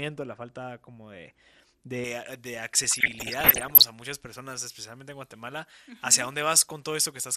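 All the way through, the speech sounds dull and a bit granular, with a plainly audible gurgle riding on it. That's most likely MP2 compression at a starved rate, something like 80 kbps: the upper sub-bands keep dropping out, and whatever's left gets quantised coarsely.

From 2.04 s right to the end, there's pre-emphasis left on. The treble boost that should have been undone on playback never was, so the highs sit about 11 dB hot at 10 kHz compared to 1 kHz, following a J.17 curve. Everything after that point sounds thin, bright and hissy on the sibilants.

Between 2.84 and 3.84 s you get DAB burbling, about a second of it. Bit errors slipped through the error correction into the MP2 data, so individual sub-bands get short blips of noise. That fits a bit error rate of around one percent.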